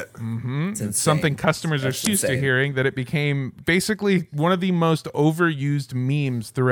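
At 2.03 s the speech is broken by damaged data in a compressed stream, lasting to 2.08 s, about 50 ms. Part of the encoded data at this point is corrupt. The decoder cannot read those frames correctly. It loses its place in the stream and hunts for the next valid frame header before normal decoding resumes. The result is a brief, harsh chirp or blip that cuts across the speech.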